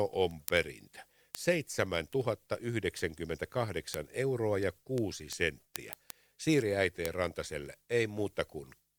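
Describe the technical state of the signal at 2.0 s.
At 2.0 s the speech carries word clock ticks, running from 0.14 to 8.96 s: an unlocked receiving clock, off by roughly a couple of hundred ppm, slips one sample about ten times a second. The steady tick rate separates it from random clicks.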